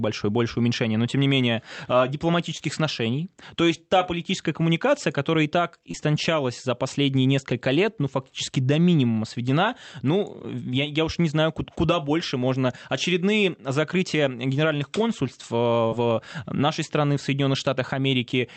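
Short concealed packet loss at 2.57–2.62 s after "тем не менее а", 5.92–5.96 s after "коммуникация которая и так", and 15.87–15.94 s before "в нашей страны в": lost audio was extrapolated, heard as brief smears, seen as smoothed, repeated-looking spectrogram slivers.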